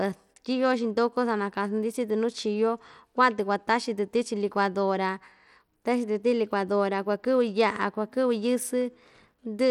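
A speech clip carrying plainly audible codec damage from start to finish: the treble flickers in and out rather than sitting steady, and a gritty noise rides on the sound. The likely cause is Bluetooth SBC compression at a starved bit pool, which fits a bitrate around 96 kbps. Unlike a simple low-pass, the bandwidth still reaches about 19.3 kHz, and unlike a perceptual codec's swirling artefacts, the grit comes from fixed, coarse sub-bands.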